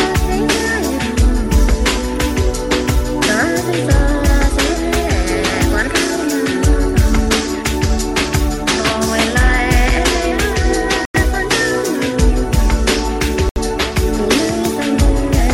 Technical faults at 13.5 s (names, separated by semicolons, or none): block of digital silence